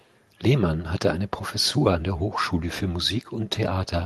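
Speech, with a faint echo leak in the first tenth of a second (0.0 to 0.1 s): a very quiet delayed copy of the speech, far below the main signal, arrives about 308 ms late. The likely cause is a far-end loudspeaker whose echo canceller let some of its microphone pickup return down the line. A separate copy at a fixed 308 ms lag sets it apart from room reverberation, which smears continuously into a decaying tail instead. The call audio tops out near 12 kHz.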